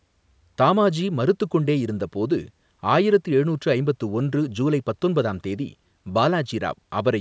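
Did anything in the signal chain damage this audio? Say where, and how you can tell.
No, nothing in the chain hurt this speech: it went through a call's microphone processing, which trims the lowest bass and leaves nothing above 8 kHz, and that's just how that stage normally works.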